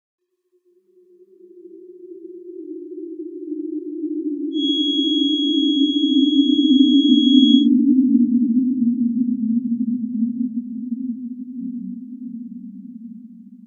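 From 4.50 to 7.69 s there's a thin feedback whistle at 3.3 kHz, sitting a little under the sound and swelling and fading slowly, likely from a speaker-to-mic loop.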